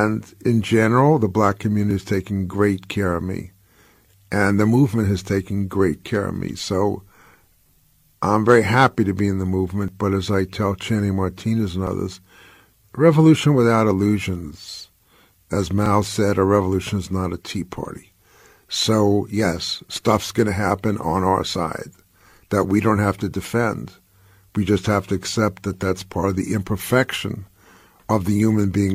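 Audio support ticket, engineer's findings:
Micro-skips in the speech at 1.91, 9.88, 11.87, 15.86 (just before "said a revolution is"), 17.85 and 25.82 s, each losing about 30 to 45 ms. The cause is overlap between stream segments: timestamps overlap at the 2 s segment boundaries, so the player trims audio that wasn't actually duplicated, and the waveform jumps.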